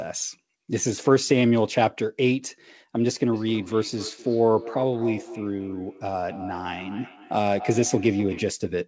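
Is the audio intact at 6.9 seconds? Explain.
No. From 3.33 to 8.61 s there is feedback echo between two devices: a second device in the room replays the call, and this microphone recaptures it where its own echo canceller cannot reach. Each word returns roughly a third of a second later, thin and ringing, peaking about 15 dB below the speech.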